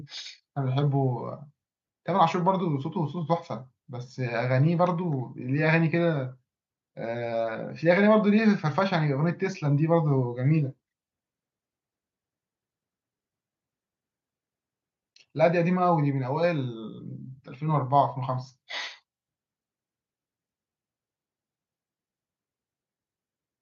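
No technical faults can be heard anywhere in the speech.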